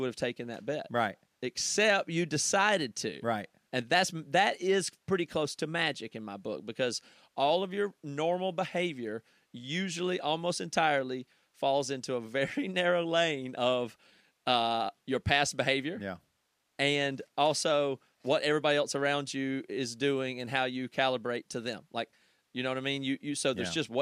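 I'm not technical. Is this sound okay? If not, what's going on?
Yes, it sounds fine.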